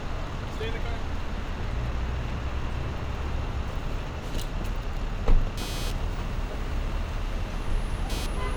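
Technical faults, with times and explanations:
5.57–8.56 s: computer activity noise. From 5.57 s to the end, a buzzing, scratchy layer rides under the sound at around 15 dB below it. Shifting processor or peripheral load moves the audio circuit's shared ground, and the chirp follows that activity, not the sound. A spectrogram shows stacked harmonic lines from a pulse rate near 300 Hz appearing abruptly at 5.57 s, while the waveform's floor thickens into a fuzzy band.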